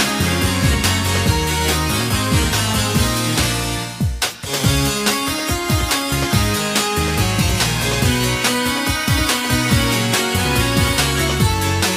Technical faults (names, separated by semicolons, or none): none